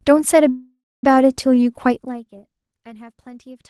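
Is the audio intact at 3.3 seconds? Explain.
Yes, the speech at 3.3 seconds is intact, with no fault at that moment.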